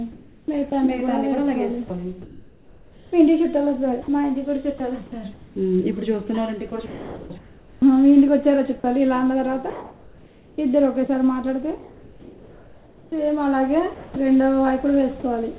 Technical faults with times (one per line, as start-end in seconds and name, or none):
0.12-14.16 sound chopped by the voice detector